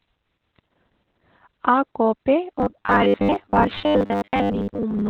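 A speech recording with Opus voice compression throughout: nothing sits above about 4 kHz, so a spectrogram shows a hard ceiling there. The muffled, hoarse, coarsely coded sound points to the SILK coder in narrowband mode at a very low bitrate, roughly 8 kbps. From 2.55 s to the end the sound turns into a rigid metallic buzz at 100 Hz. This is likely robotic sound from repeated short buffers, with a 10 ms stretch replayed for about half that span. On a spectrogram it shows as evenly spaced vertical striations every 10 ms, and on the waveform as identical repeating cycles.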